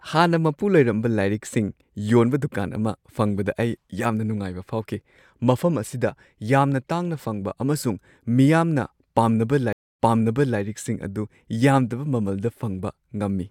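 At 9.73 s the speech drops into about 0.27 s of silence, a stream reconnect: the connection broke, the player restarted its decoder mid-stream, and the server resent a burst, so the audio picks up about 0.6 s earlier than where it cut off. The repeated stretch runs to 10.59 s, its first frame or two muted or fading in. A waveform shows a flat gap then a ramping onset; the spectrogram shows a blank column followed by recognisably repeated patterns.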